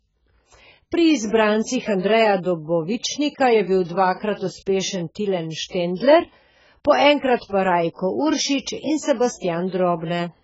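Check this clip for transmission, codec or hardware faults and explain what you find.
One codec fault runs through the whole speech clip. The sound is dull and smeared throughout, with nothing above 7.7 kHz and a warbling, fizzy texture on sibilants and held sounds. That is likely heavy AAC compression: the encoder cuts the top band and leaves spectral holes, consistent with AAC-LC at roughly 12 kbps.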